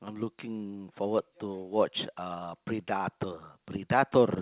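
No faults are audible in the speech, which has come through a WebRTC call path whose band stops at 4 kHz, consistent with G.711 A-law coding.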